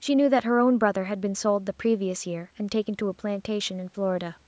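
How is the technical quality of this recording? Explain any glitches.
No glitches or faults are audible anywhere here.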